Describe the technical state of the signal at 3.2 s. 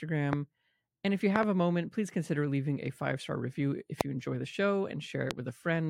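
At 3.2 s the signal is intact, with no dropout, clipping, distortion or other fault audible at that point.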